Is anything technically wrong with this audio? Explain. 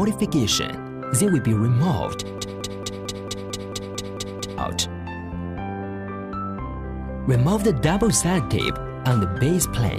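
Yes. A broken-record loop runs from 2.38 s to 4.58 s. One fragment, 223 ms long, plays ten times in a row with no gap. Each pass is identical, so it sounds like a rapid mechanical stutter, about four and a half repeats per second. The audio that should have filled those two seconds is missing. The likely cause is a stalled player, encoder or stream that kept resending the last piece it had buffered.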